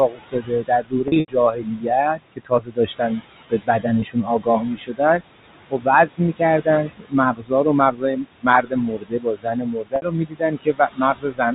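Throughout the clip, noise suppressor artifacts are present. The suppressor treats the room noise, which sits about 14 dB under the speech, as steady noise and pulls those bands down by about 18 dB frame by frame. The background sinks in the pauses and rises again beneath the talking.

From 0.09 to 5.22 s, speech is cut by the noise suppressor. It mistakes quieter parts of the speech for noise and lowers them by as much as about 21 dB, across roughly two seconds in total. Soft consonants and word endings sound swallowed or faint.

From 1.08 to 1.28 s, there is packet loss with pitch repetition. About 140 ms of audio is lost in scattered gaps, the longest lasting 80 ms. The receiver fills each gap by repeating the last pitch period, so the sound catches on a held, buzzy tone. The longest gap fades toward silence before a short cross-fade brings the speech back.

At 4.00 s, a single 20 ms loss is bridged the same way. 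It leaves only a brief, slightly buzzy hold.

From 5.71 to 11.53 s, the noise suppressor cuts speech again, this time by up to about 22 dB. Roughly three seconds are affected, and quiet phrases and consonant tails dip out along with the background.

From 9.96 to 10.02 s, a 60 ms packet loss is concealed by pitch repetition. The result is a short, droning hold that fades into silence before the speech resumes.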